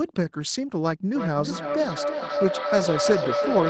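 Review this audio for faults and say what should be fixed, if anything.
Feedback howl, from 1.15 s to the end: a second device in the room fed its loudspeaker back into the call microphone, each pass gaining level. A tone near 500 Hz builds, pulsing roughly every 300 ms, peaking at about -1 dB relative to the speech. Mute one device or use headphones to break the loop.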